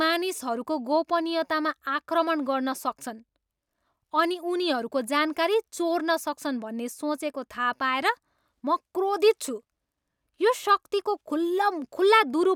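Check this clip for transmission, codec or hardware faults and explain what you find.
Nothing turns up here worth flagging; the speech holds steady throughout, and there are no faults to report.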